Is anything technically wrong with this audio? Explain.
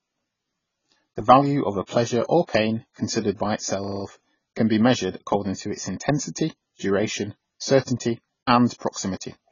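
Yes. Throughout the speech, nothing reaches above 7 kHz and the damage is heavy: dull, smeared sound with a warbling texture, likely AAC compression at a very low bitrate, around 16 kbps. Unlike a simple low-pass filter, the coder also starves the remaining bands, which causes the warble.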